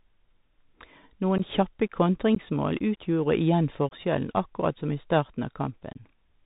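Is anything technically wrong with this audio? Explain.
Yes. The Bluetooth CVSD headset codec runs throughout. Its one-bit, 64 kbps delta coding cuts everything above 4 kHz, roughens s sounds and leaves granular hiss under the speech. Unconcealed Bluetooth headset packet loss hits at 1.38, 2.35, 3.89 and 5.93 s. Between 15 and 22.5 ms of audio drops to silence or an idle pattern, which points to two or three lost packets. The edges are abrupt, and the speech returns briefly quieter.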